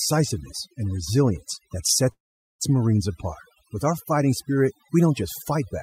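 Overdone noise removal runs through the whole clip. A noise reduction stage set far too aggressively pulls individual frequency bands down or out entirely whenever they sit close to its noise estimate, so the quieter parts of the speech are stripped along with the background noise. The background drops away and breaks up into twinkling specks, and the voice has its softer consonants and tails eaten away.

A call audio freeze follows from 2.11 to 2.62 s, right after "and resilience that". The stream stops advancing and the gap is bridged with sound that is not in the original: a brief fading continuation of the last sound, then about 430 ms of silence, about half a second in all. The likely cause is delayed packets draining the jitter buffer. Speech resumes exactly where it paused, with nothing lost, but everything afterwards now runs about 482 ms late.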